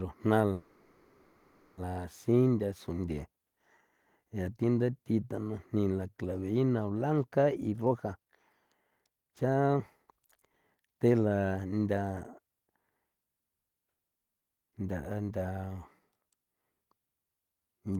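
Packets were likely held up and the jitter buffer ran dry, causing a call audio freeze from 0.53 to 1.79 s: the last sound stretches into a fading buzz or hiss, then resumes intact, 1.24 s late. A jitter buffer speed-up follows as the receiver trims surplus delay, cutting pitch-period slices so the audio hurries at unchanged pitch: 140% speed from 7.58 to 8.30 s, shedding about 0.3 s, then 131% from 8.91 to 12.01 s, shedding roughly a second.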